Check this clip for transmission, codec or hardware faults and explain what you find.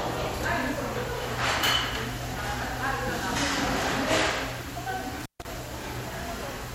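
One hardware fault is present: an intermittent contact between 5.20 and 5.45 s. A loose cable or plug briefly loses connection, so the signal drops out for about 143 ms inside that span. Scratchy crackle marks the break and the reconnect, and a faint hiss remains while the line is open. That crackle and the analogue hiss floor set it apart from a network packet dropout, which leaves clean silence or smeared concealment with no contact noise.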